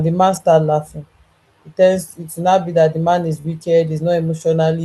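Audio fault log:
0.31–0.37 s, lost packet rebuilt from error correction: just after "the man", about 40 ms plays back rougher and noisier but with no gap. This fits two lost packets replaced by the low-bitrate redundant copies carried in the following packets.
3.41–3.46 s, short concealed packet loss: after "that the man is", about 20 ms of audio never arrived. The decoder extended the preceding sound for roughly 28 ms and blended back into real audio, heard as a brief smear where the original detail is missing.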